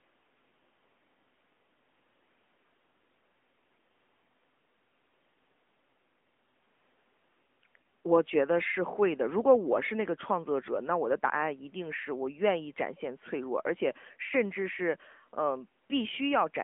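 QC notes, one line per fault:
Throughout, AMR narrowband mobile codec: speech is squeezed into a 200 Hz to 3.4 kHz phone band with nothing past 3.6 kHz, and sounds clearly buzzy and synthetic, which fits a 10.2 kbps mode.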